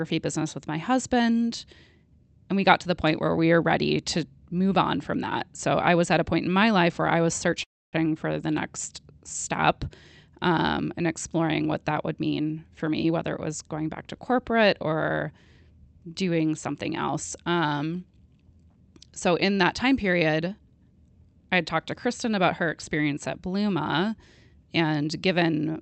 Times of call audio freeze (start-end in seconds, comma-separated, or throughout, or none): 7.63-7.96